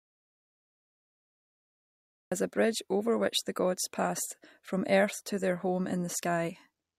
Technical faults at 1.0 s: audio dropout to silence

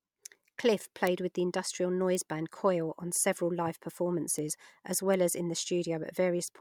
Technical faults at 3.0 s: none

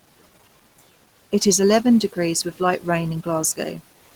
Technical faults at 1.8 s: Opus compression

